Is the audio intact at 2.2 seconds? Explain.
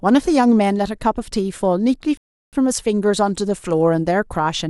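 No. A rebuffering stall runs from 2.17 to 2.53 s: the player exhausted its downloaded audio and paused, inserting 354 ms of silence before the speech resumes exactly where it stopped. The waveform shows a flat gap and the spectrogram a blank vertical band.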